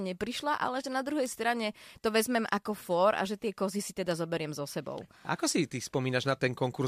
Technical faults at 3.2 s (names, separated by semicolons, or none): bit error spike